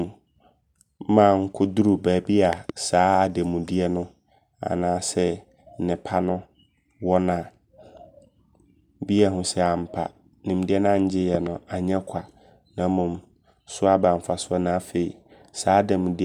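At 2.53 to 2.72 s and 11.35 to 11.49 s the speech carries a loud pop, each a quick double thump standing well above the level, the first more so. Unlike a dropout, the speech continues underneath. A voltage pulse, likely from a plug, switch or static, was added to the signal.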